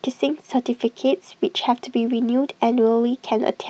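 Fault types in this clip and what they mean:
No faults present; the speech went through a normally working WebRTC call path using the Opus codec at 48 kbps, with the audio band ending at 8 kHz as expected for that link.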